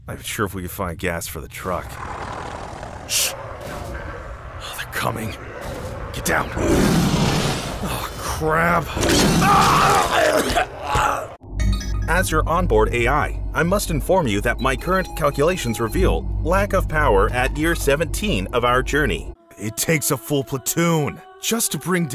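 Nothing goes wrong anywhere in the recording, so there's no technical fault to point out.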